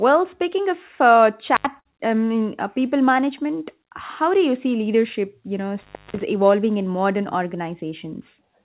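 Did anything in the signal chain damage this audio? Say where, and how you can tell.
Yes. At 1.55 to 1.66 s, just before "I mean uh people", and again from 5.83 to 6.21 s, between "see leadership you know" and "evolving in modern", the speech drops out with crackle at each edge. That is an intermittent contact in the analogue wiring, a loose plug opening for about 79 ms and then about 246 ms.

From 1.80 to 1.87 s, also just before "I mean uh people", the last sound is held and fades, then the speech jumps ahead. That is a burst of packet loss on the network: about 50 ms was concealed and about 60 ms of speech never arrived.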